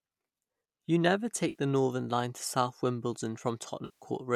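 At 1.49 s the speech smears into a brief noisy, phasey patch lasting about 60 ms, and at 3.85 s a longer stretch of about 160 ms does the same. That's AAC frame loss with concealment. Frames went missing, probably from the low-delay AAC stream, and the decoder covered the gaps by reusing its last good spectrum with jumbled phase. The first gap fits about six short frames. The second, nearer sixteen, stretches the fill-in further before the speech returns at 4.05 s.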